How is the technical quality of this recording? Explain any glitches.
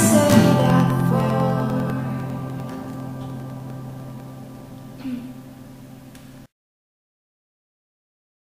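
Periodic USB or driver dropouts, 0.10 to 4.70 s: every 0.1 s, roughly a millisecond of audio is blanked to silence, giving a steady train of small ticks.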